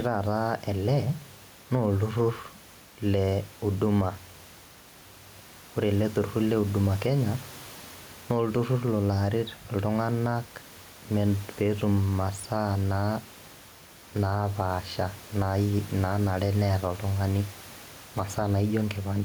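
Gain pumping runs through the whole clip. The gain ducks by around 5 dB under loud speech, likely from excessive gain hitting a fast limiter.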